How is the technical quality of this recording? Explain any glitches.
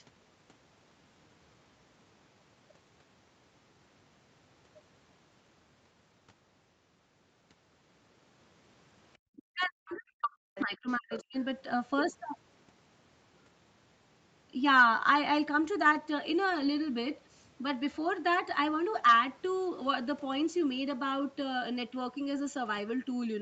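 The recording has a brief patch of echo and speech-suppression trouble between about 9.4 and 11.4 s.

Other side's voice leaking through, at 9.36, 10.55, 10.89 and 11.11 s: an echo canceller likely missed loudspeaker pickup, so short scraps of a second voice surface, roughly 15 to 30 dB below the speech.

Speech suppressed in double talk, from 9.49 to 11.37 s: with both sides talking, the canceller likely clamped down on everything, so the speech dips in pieces for about 1.5 s, by around 40 dB at its deepest.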